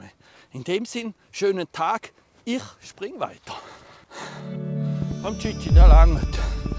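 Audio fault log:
5.02–6.78 s, train of clicks: uneven popping, about 5.5 per second, peaking well above the sound. Likely caused by interference or a faulty connection.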